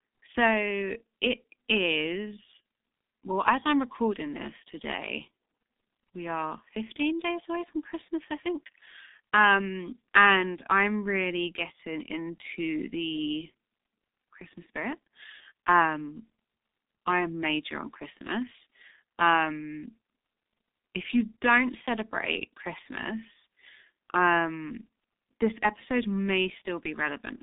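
It's a speech recording with G.723.1 codec damage running through the whole thing, and it's heavy. The sound sits in a narrow telephone band, roughly 250 Hz to 3.7 kHz, with nothing above 3.8 kHz, so it comes across muffled and hoarse and the consonants smear together. That's the low-rate coder rebuilding the voice from a coarse model in 30 ms chunks, and the texture fits its 6.3 kbit/s mode.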